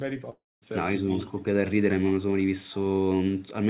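From 0.30 to 0.63 s the speech breaks off. The last sound smears into a fading buzz, then goes silent before picking up again, most likely a long network dropout.

Between 1.07 and 1.45 s the voice sinks by around 10 dB in patches, likely speech suppressed in double talk, with the echo canceller ducking the talker while the far end spoke.

Throughout, the band tops out at 4 kHz, which fits a G.711 mu-law call path.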